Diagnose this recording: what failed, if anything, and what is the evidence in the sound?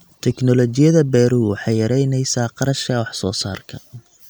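Nothing in the recording points to a failure at any stage between capture and playback: the speech signal holds steady and continuous throughout, with no audible sign of a broken link in the chain.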